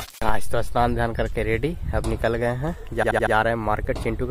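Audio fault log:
3.02–3.33 s, repeated frames: a 78.4 ms chunk gets played four extra times back to back, so you hear a quick stutter. The block length fits about three compressed frames being resent, and the clip ends up roughly 0.31 s longer.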